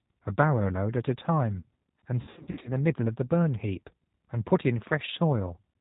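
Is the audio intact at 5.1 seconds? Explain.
No. At 5.1 s, as throughout the clip, the speech sounds rough and synthetic, with nothing above 4 kHz. This is G.729 codec damage, consistent with 8 kbit/s rebuilding from a vocal tract filter and sparse pulses.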